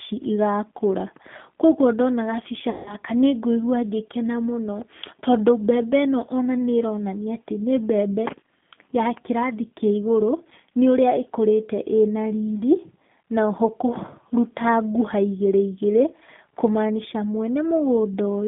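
Throughout the clip, the speech passes through a G.729 codec. The sound points to G.729A at 8 kbit/s. It rebuilds each 10 ms frame from a vocal tract filter, a pitch predictor and a handful of pulses instead of the actual waveform, and the line band runs only from 150 Hz to 3.5 kHz. The voice is therefore thin and muffled, with a plainly audible rough, synthetic texture.

From 2.70 to 2.96 s, VoIP packet loss concealed by the speech codec takes over. About 160 ms of audio went missing, which fits eight 20 ms packets. The decoder filled the gap by repeating its last pitch and filter settings while lowering the gain frame by frame. The sound smears into a buzzy tone or coloured noise that fades away. Because each frame builds on the one before it, the voice stays weak and distorted for a moment after real packets return.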